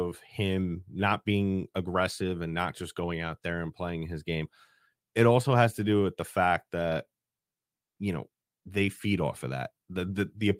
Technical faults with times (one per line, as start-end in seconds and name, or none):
none